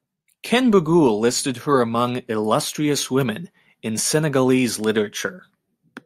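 In this speech clip, single bits flipped in memory or on a digital link, knocking a sample or a few adjacent samples off by a power of two before the waveform snapped back. The result is three bit error spikes, each a sharp, broadband tick with no relation to the speech: at 1.35 s just before "her among illustrious", at 3.21 s just after "her among illustrious", both peaking near about -18 dBFS, and a louder one at 4.84 s reaching about -12 dBFS.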